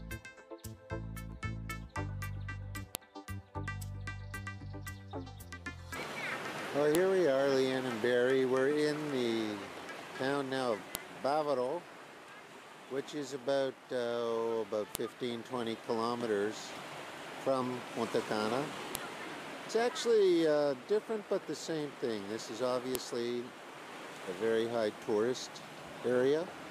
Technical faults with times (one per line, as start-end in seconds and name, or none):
2.95 file header played as audio
6.95 file header played as audio
10.95 file header played as audio
14.95 file header played as audio
18.95 file header played as audio
22.95 file header played as audio